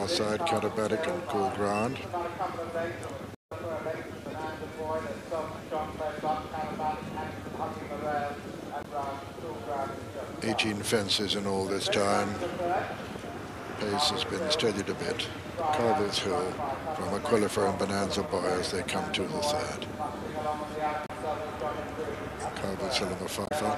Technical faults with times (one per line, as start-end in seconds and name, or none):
3.33-3.53 damaged data in a compressed stream
8.81-8.86 damaged data in a compressed stream
21.06-21.10 damaged data in a compressed stream
23.44-23.52 damaged data in a compressed stream